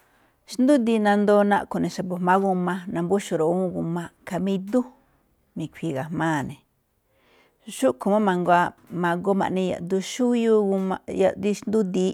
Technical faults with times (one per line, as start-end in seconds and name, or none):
none